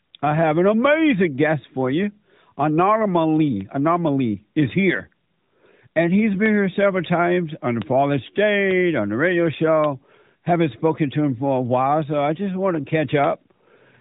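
At 3.61 s, 6.46 s and 8.71 s the speech is pierced by a bit error spike: a single sample whose value jumped by a power of two when one bit flipped, then snapped straight back. Each is heard as a dry, isolated tick unrelated to the speech, standing out against the narrowband mobile sound, which stops near 3.8 kHz. On a waveform each appears as a one-sample needle; on a spectrogram, as a thin vertical line spanning every frequency.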